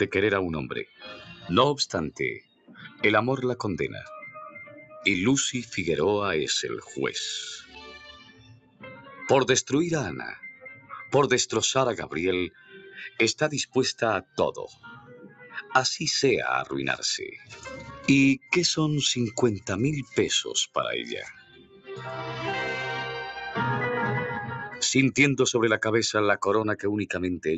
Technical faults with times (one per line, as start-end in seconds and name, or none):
0.00-27.58 noise suppressor applied to music or sounds
0.85-1.47 sound cut by the noise suppressor
2.11-3.03 sound cut by the noise suppressor
4.65-5.01 sound cut by the noise suppressor
7.63-9.21 sound cut by the noise suppressor
10.53-10.92 sound cut by the noise suppressor
12.50-15.71 sound cut by the noise suppressor
17.40-18.47 sound cut by the noise suppressor
21.33-21.92 sound cut by the noise suppressor